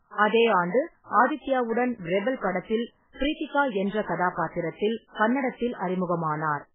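Throughout the speech, everything above 3.7 kHz is missing, leaving it dull and boxed-in, with a heavy watery, swirling texture and smeared attacks. This is likely MP3 compression at a starved bitrate, which fits roughly 8 kbps, zeroing weak frequency lines from frame to frame.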